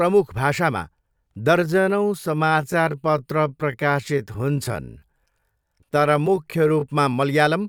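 Speech runs at a natural pace until 1.54 s. From there to 6.86 s it is a time-stretched section, slowed to about 0.68 times normal speed. The pitch does not drop with it. The delivery turns drawn out. The likely cause is software lengthening the audio to fill a set duration by repeating short pieces. At 6.86 s the pace snaps back.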